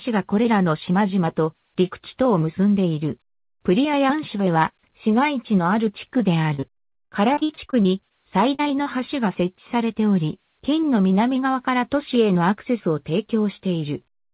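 From 6.54 to 8.13 s, then again from 8.55 to 9.01 s, there's repeated packet loss: packets keep dropping, and each hole, up to about 70 ms, gets patched by stretching the previous sound. That makes it choppy and robotic, over audio already band-limited to 4 kHz.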